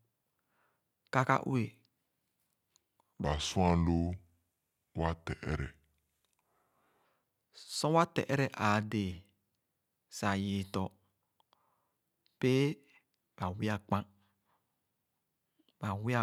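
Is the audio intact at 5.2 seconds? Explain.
No. From 3.25 to 7.05 s the speech is a section at the wrong speed, playing at 0.764 times its recorded rate, likely from being clocked against the wrong reference. Pitch and tempo drop together, so the voice sounds about five semitones deeper and dragged.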